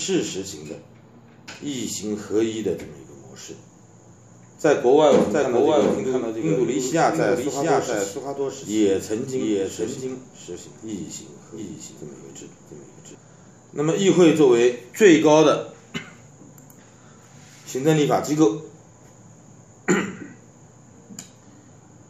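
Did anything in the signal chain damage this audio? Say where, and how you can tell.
Yes. A doubled audio track runs 5.31–13.15 s: a copy about 0.7 s late and 5 dB quieter, likely from a second capture path; the spectrogram repeats every event, abruptly bounded.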